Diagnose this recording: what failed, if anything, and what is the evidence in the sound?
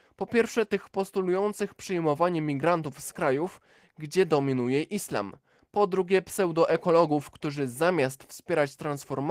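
Opus voice compression at the codec stage, present throughout. The speech sounds hoarse and slightly robotic, with a coarse, grainy texture. That points to a hybrid-mode SILK/CELT encoder at a bitrate around 16 kbps, where the excitation signal is quantised too coarsely.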